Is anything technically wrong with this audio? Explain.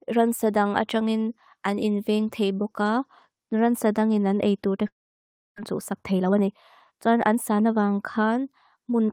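Yes. There are two faults.

From 4.87 to 5.60 s there is a long network dropout. The speech breaks off into a brief fading buzz, then near-silence for about 0.66 s. This is likely a stretch of lost packets, concealed and then abandoned. About 0.4 s of speech never returns.

From 5.75 to 7.73 s there is a jitter buffer speed-up. The receiver had built up excess delay after the gap. It trimmed tiny pitch-period slices repeatedly, removing roughly 0.3 s. The speech runs at about 114% speed with unchanged pitch and sounds rushed.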